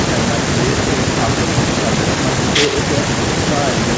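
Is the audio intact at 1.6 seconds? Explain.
Yes, at 1.6 seconds the speech is intact, with only the ordinary call microphone processing audible as a low end with the lowest bass taken out and no content above 8 kHz.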